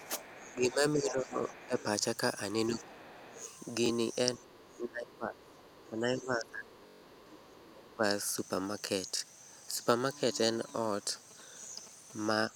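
Speech suppressed in double talk hits this speech recording from 0.00 to 1.78 s, 2.70 to 3.37 s, 4.35 to 8.03 s and from 12.50 s to the end. The talker dips by about 10 to 25 dB, likely because the echo canceller, unable to separate near speech from loudspeaker echo, attenuated both. The other side's voice leaking through overlaps those stretches, at 0.05 to 1.83 s, 2.81 to 3.52 s and 4.50 to 7.62 s, as a faint second voice roughly 20 to 30 dB below the talker, likely residual loudspeaker pickup the canceller failed to remove. Bluetooth stutter occurs at 3.86 to 3.90 s, 6.87 to 7.03 s and 9.17 to 9.23 s, where a slice of about 21 ms is replayed while packets are missing. The longest, 149 ms, buzzes like a machine-gun run, which fits several consecutive lost frames, before the audio jumps ahead. GSM signalling bursts run from 10.22 to 12.36 s as a galloping dit-dit-dit of short 217 Hz buzzes about 20 dB below the speech, produced when a nearby 2G phone's short radio bursts are rectified by the audio circuitry.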